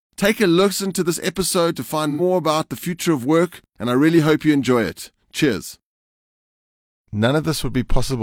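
AAC frame loss with concealment hits this speech clip from 2.10 to 2.21 s, between "to this episode to" and "about the future of". Roughly 85 ms of coded audio is missing, which fits two dropped AAC frames. The decoder bridges the gap by reusing the last good spectrum with scrambled signs or interpolated energy, so the patch sounds smeared, noisy or phasey rather than cutting to silence.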